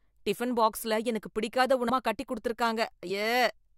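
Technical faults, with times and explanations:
1.88 s, compressed frames skipped: just after "டிபன் பாக்ஸில எனக்கு பிடிக்காத" the speech jumps forward by about 300 ms, which fits roughly fifteen whole frames of 23.2 ms each going unplayed, either lost from the file or rejected by the decoder as damaged. Because adjacent frames overlap, the join comes out as a short smeared blip instead of a sharp click, and the passage that follows starts abruptly, with part of the utterance missing.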